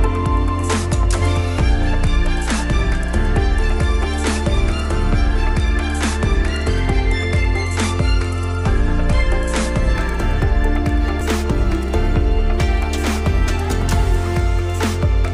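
From 9.93 s to the end, imaging from linear upsampling appears. Raising the rate by straight-line interpolation, which fits a 24 kHz to 44.1 kHz conversion, dulls the top of the band and leaves a faint mirrored copy between 12 and 24 kHz, around 35 dB down, giving a light metallic shimmer.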